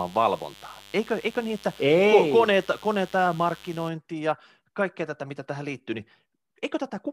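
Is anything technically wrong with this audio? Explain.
Yes. Mains buzz runs from 0.0 to 3.88 s, stopping just before "ja kaikkea tätä mitä". Switching spikes from a dimmer, rectifier or unshielded line enter twice per 50 Hz cycle, spraying harmonics into the kilohertz range and producing a steady, raspy buzz roughly 25 dB below the speech.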